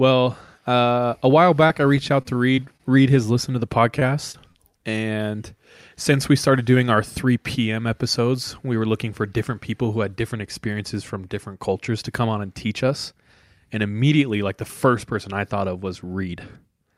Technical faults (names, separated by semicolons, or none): repeated packet loss (robotic sound); short stall from a late packet; short concealed packet loss